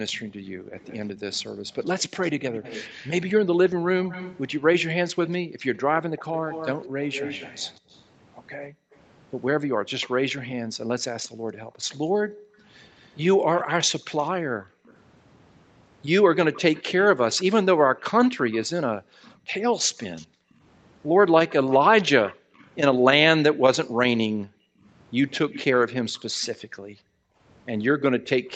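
From 0.14 s to 28.51 s there is an echo leak. A copy of the speech returns about 231 ms late, roughly 15 dB below the direct voice. The cause is likely a loudspeaker-side echo canceller that failed to remove what its microphone picked up and sent it back down the line.

The echo canceller also clamped down on the microphone while the far end played, so the background is gated by the echo canceller. Between 0.24 s and 1.66 s the room sound dips by up to about 10 dB for less than half a second in total. At 5.45 to 5.63 s it drops by up to about 40 dB, falling briefly to near silence. From 8.7 s to 27.4 s repeated drops of up to about 40 dB add up to roughly five seconds in which the background cuts out and returns.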